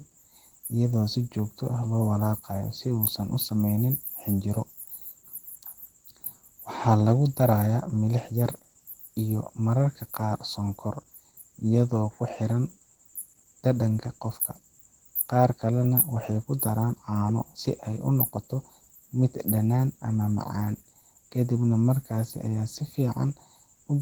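Throughout, the speech sounds hoarse and grainy rather than swirly as MP3 would, likely Opus compression in hybrid mode, fitting a rate near 16 kbps.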